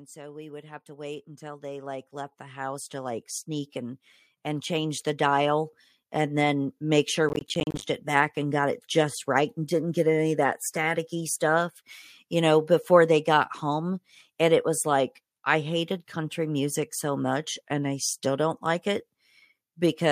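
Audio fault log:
0.13–3.8 s and 4.31–7.1 s, automatic gain rising: the gain control judged the input too quiet and eased it up, about 14 dB then about 6 dB, so speech and background swell together.
7.29–7.83 s, processor overload crackle: the processor kept missing buffer deadlines, each roughly 10 ms slot dropping to silence, giving a gritty burst of tiny gaps that stops once the load clears.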